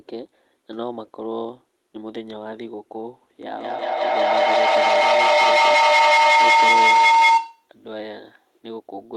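From 3.49 s to 7.73 s a feedback howl takes over the speech. The sound is leaking from a loudspeaker back into a microphone on the same call, and each pass around that loop comes back louder. It narrows to a tone near 1 kHz, with the loop coming round about every 200 ms, and peaks about 15 dB above the speech. Unlike a plain echo, the repeats grow instead of fading, and unlike a steady interfering whistle, the tone keeps building until the loop is broken.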